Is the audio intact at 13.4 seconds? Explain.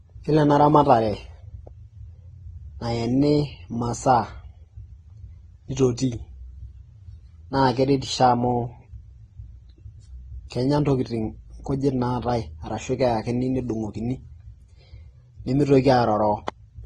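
No. Like the whole clip, 13.4 s was likely transcoded between lossy codecs, Vorbis-like then Opus-like. Their artefacts stack and are heard together, and nothing remains above 12 kHz.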